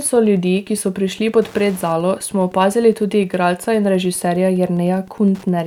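A speech recording with Wi-Fi interference throughout: a faint tick every 102.4 ms, around 30 dB below the speech, from a nearby radio's beacon bursts being rectified by the audio circuitry.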